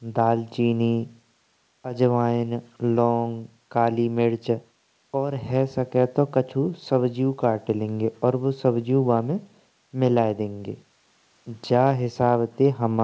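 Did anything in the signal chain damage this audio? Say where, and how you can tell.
No, nothing in the chain damaged it: the speech simply stops at about 8 kHz, which is what you'd expect from a wideband call path and fits G.722 running at 64 kbps, and that ceiling is just how the call carries audio rather than something that went wrong.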